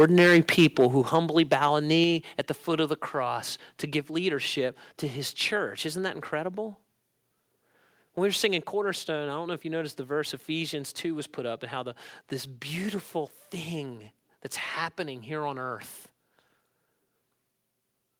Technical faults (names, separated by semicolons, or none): microphone overload; microphone volume stepped down